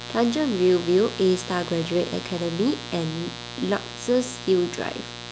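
Mains buzz runs throughout the speech. Sharp switching spikes repeat twice per 60 Hz cycle, spraying harmonics into the kilohertz range as a raspy buzz about 15 dB below the voice.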